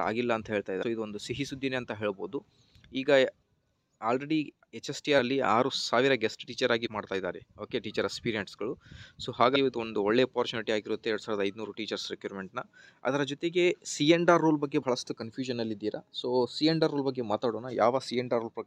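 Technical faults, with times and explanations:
0.82–0.84, 5.18, 6.85–6.87, 9.55–9.57 and 14.82 s, compressed frames skipped: the sound jumps forward by roughly 200, 100, 200, 100 and 50 ms, whole frames missing or rejected as damaged. The jump sizes fit a 23.2 ms frame.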